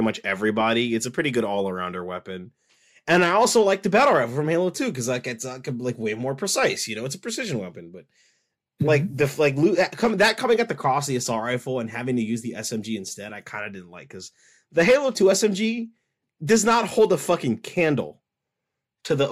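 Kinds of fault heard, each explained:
No technical fault can be heard anywhere in the signal.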